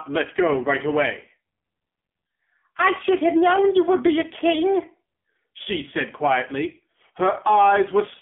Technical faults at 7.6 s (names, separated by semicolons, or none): AMR narrowband mobile codec